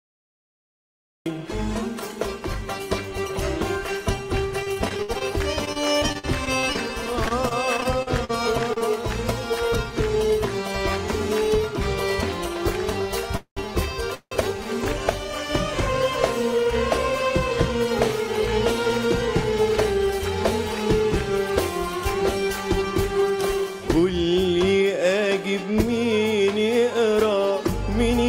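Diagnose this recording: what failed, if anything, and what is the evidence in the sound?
The sound bursts in abruptly at 1.26 s out of digital silence, mid-event, with no attack. This is a cut-off start: the recording or stream began late.

From 4.63 to 8.82 s the sound turns choppy and robotic, with dozens of holes up to 64 ms patched by repeating sound. This is repeated packet loss on the network.

At 13.37 to 13.59 s and 14.15 to 14.33 s the sound stalls into a fading buzz or hiss, then 100 ms and 70 ms of silence, and resumes with nothing lost. These are call audio freezes, likely from delayed packets emptying the jitter buffer.

From 17.02 to 21.08 s the sound runs about 3% fast at unchanged pitch as the receiver trims pitch periods, roughly 150 ms in total. This is a jitter buffer speed-up shedding excess delay.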